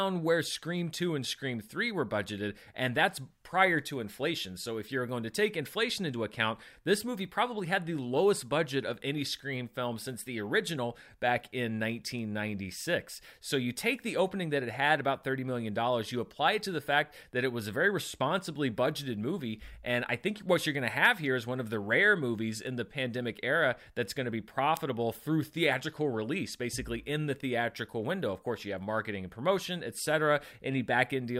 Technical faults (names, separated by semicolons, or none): word clock ticks